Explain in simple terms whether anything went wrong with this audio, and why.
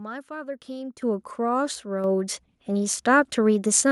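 Twice the whole recording suddenly gets louder in a single jump, first at about 1.02 seconds and again at 2.04 seconds. The speech and the background noise rise together, and the first jump is clearly bigger than the second. This is a microphone volume stepped up fault. The call software decided the microphone was too quiet and turned up its input volume in one abrupt step, then did it again, instead of adjusting gradually.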